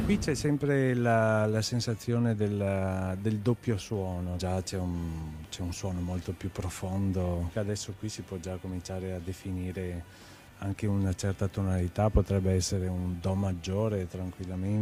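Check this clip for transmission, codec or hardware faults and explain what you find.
No transmission, codec or hardware faults.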